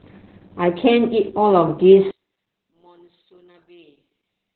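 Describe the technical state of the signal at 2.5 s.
At 2.5 s the speech carries heavy Opus voice compression: nothing above 4.4 kHz, leaving a flat spectrogram ceiling, with muffled, hoarse, slightly robotic coarse coding that fits a narrowband SILK stream near 8 kbps. From 2.11 s to the end, the level falls by about 36 dB, so the waveform collapses to a thin trace. The likely cause is one channel inverted, cancelling the centred speech when summed to mono.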